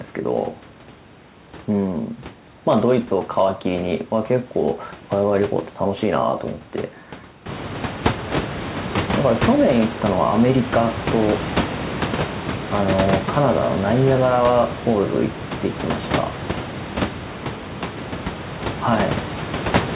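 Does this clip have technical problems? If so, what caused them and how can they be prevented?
No, this clip has no technical problems to report. The call path shows up as a narrowband sound with nothing above 4 kHz, which fits a telephone codec such as G.711, and the room's own background noise rises by about 17 dB at around 7.5 s while staying about 7 dB below the speech.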